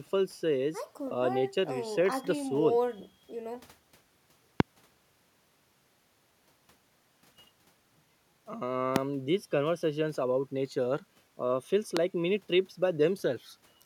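Three sharp loud pops sit on top of the speech at 4.60–4.62 s, 8.96–8.98 s and 11.97–11.99 s, peaking roughly 20 to 25 dB above it, likely from a voltage spike such as a switch or static discharge.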